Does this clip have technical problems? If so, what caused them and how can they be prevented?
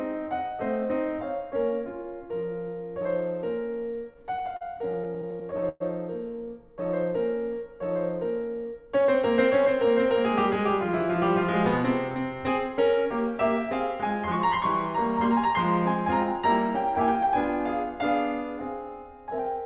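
Yes. From 3.94 to 5.82 s, packets arrived late and the jitter buffer kept running dry, causing repeated stalls (stutter): 17 gaps, about 0.3 s in total, the longest 114 ms, each bridged by stretching the preceding music, so nothing is lost but it drags and stutters. A larger or adaptive jitter buffer on a steadier network connection would prevent this.

From 8.48 to 9.15 s, the buffer held more than its target, so a jitter buffer speed-up trimmed short pitch-period slices, roughly 70 ms in all. The music plays about 9% fast at unchanged pitch and briefly loses its steady tempo. Smoother packet delivery, or a gentler catch-up rate in the receiver, would prevent this.

The call path's cut-off above 4 kHz, which fits a 64 kbps G.711 mu-law codec, is heard throughout.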